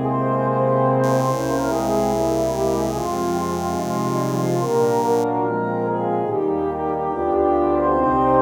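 A raspy mains buzz comes in at 1.03 s and hangs on until 5.24 s, sitting roughly 20 dB under the sound. It's built on 60 Hz, with sharp switching spikes from a dimmer, rectifier or unshielded line stacking harmonics up into the kilohertz range.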